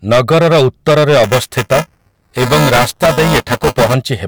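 From the start and through the whole clip, hard clipping flattens the speech peaks. The level is driven about 13 dB past what the stage can pass, so roughly a tenth of samples are cut off. Unlike soft saturation, the flat tops give a harsh, bright fuzz on every loud syllable rather than a warm thickening.

Just after "ନଗରର ଉତ୍ତରରେ", from 1.24 s to 3.94 s, buffer tearing adds a steady robotic rattle at 375 Hz, which fits a 128-sample buffer. The writer and reader have slipped out of step, so a small slice of each period replays audio from about 10 ms earlier, with hard joins on both sides. Unlike dropouts, nothing goes silent. The buzz holds a fixed pitch and is heard only while there is speech.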